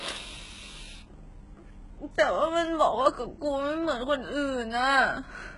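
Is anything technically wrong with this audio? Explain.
Yes. Throughout the speech there is heavy damage that likely comes from HE-AAC compression at a very low rate, which fits a bitrate of about 12 kbps. The codec kept only the lower spectrum and synthesised the treble by copying lower bands upward under a coarse envelope, so the top sounds artificial. Harmonics fail to line up across the crossover, s sounds come out gritty and lispy, and nothing remains above 11.1 kHz.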